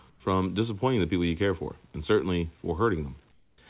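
At 0.1–0.2 s and 3.32–3.58 s the background turns flat and featureless, about 4 and 10 dB quieter: comfort noise in place of the background, likely from discontinuous transmission.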